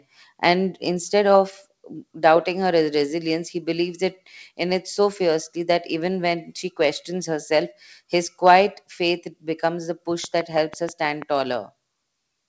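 From 10.24 to 11.23 s, a train of clicks ticks through the speech. About seven evenly spaced pops arrive six times a second, peaking roughly 10 dB above the speech. Nearby interference is the likely cause.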